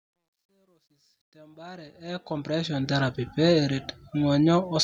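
From the very start to about 2.90 s, the speech fades in with truncation distortion on the fade. The fade stage keeps too few bits and adds no dither, which fits a 12-bit path. At low level the waveform collapses into coarse square steps. Between 0.0 and 1.51 s it's at its worst, gritty. The fade-in itself rises to full level by about 2.9 s.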